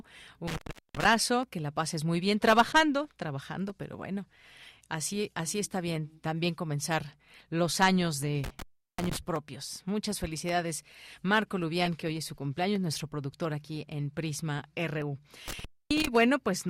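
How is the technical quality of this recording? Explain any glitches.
The recording has two recurring faults: dropouts from a loose connection and brief decoding glitches.

Intermittent contact at 0.48–1.05 s, 8.44–9.17 s and 15.48–16.07 s: the connection opens for 0.39, 0.37 and 0.26 s. The audio cuts out with crackle at each edge and faint hiss while open.

Corrupt frame decoded at 2.72 s, 4.63–4.67 s, 5.67 s, 11.82–11.88 s and 12.92–12.97 s: damaged compressed frames were played anyway, misplacing energy in frequency. Each produces a short chirp or noise blip, loudest at 11.82 and 12.92 s.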